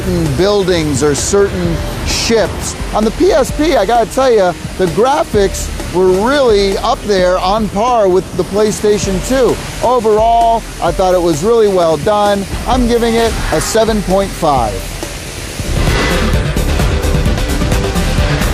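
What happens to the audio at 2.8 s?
Nothing goes wrong at 2.8 s: the audio plays through that moment intact, with no dropout, click, glitch or other fault.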